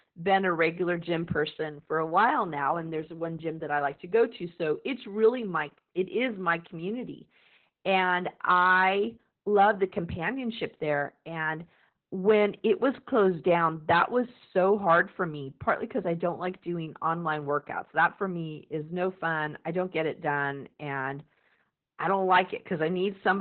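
From start to finish the speech carries heavy Opus voice compression damage. Nothing reaches above about 4.3 kHz, the narrowband limit the coder falls back to at starved rates. The sound points to roughly 8 kbps in the SILK linear-prediction mode. The coarse coding of the excitation leaves the voice muffled and hoarse, with a slightly robotic buzz. The loss of everything above 4.3 kHz dulls consonants and gives a telephone-like closeness.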